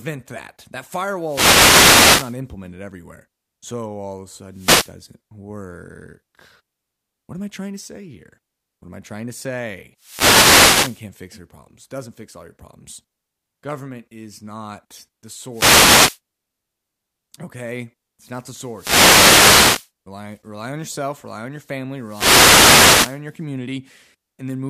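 The radio link of an analogue FM microphone fades as reflections cancel, letting receiver noise rise. This causes wireless microphone noise hits, heard as short swishes of static over the speech at 1.22–2.39 s, 4.52–4.94 s, 9.97–11.08 s, 15.51–16.20 s, 18.73–19.91 s and 22.05–23.22 s.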